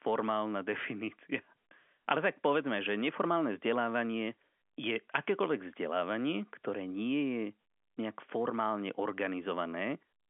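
Telephone-line speech, with no technical faults to be heard.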